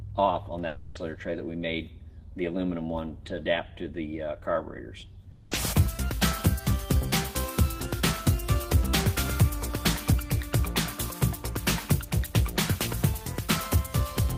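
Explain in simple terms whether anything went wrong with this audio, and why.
Two spots go wrong, at 0.67 to 0.98 s and 5.31 to 5.54 s. The sound turns into a fading buzzy smear for a few tenths of a second, then picks up with a bit missing. That's likely a long network dropout, with the receiver papering over the gap.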